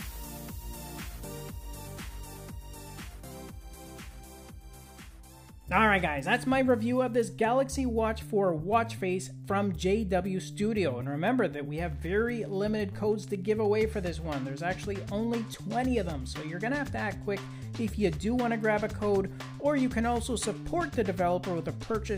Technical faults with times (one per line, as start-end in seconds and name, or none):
1.23 bit error spike